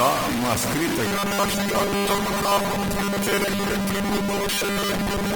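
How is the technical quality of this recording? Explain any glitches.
Poor, with three overlapping faults that leave the speech harsh, grainy and, for most of its length, mechanical.

Low bit depth without dither, throughout: the speech is coarse and gritty, with distortion roughly as loud as the speech itself. The likely cause is truncation to only a few steps, fitting about 3 bits.

Opus compression, throughout: tones sound rough, noisy and grainy rather than swirly, though content extends to 20.2 kHz. This is likely music-mode Opus running short of bits, consistent with about 24 kbps.

Robotic sound from repeated short buffers, from 1.07 s to 5.36 s: the speech becomes a rigid, metallic 200 Hz buzz. The likely cause is late audio patched by replaying a segment fitting a 5 ms buffer, replacing most of the real signal.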